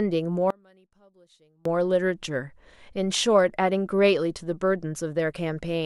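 One channel inverted, from 0.50 to 1.65 s: the speech level collapses by about 33 dB, most likely because one side of the stereo pair has flipped polarity. When the two channels are folded to mono, the centred voice present equally in both cancels almost entirely, and its low end goes with it. What survives is only the small difference between left and right, heard as a faint residue until full level returns at 1.65 s.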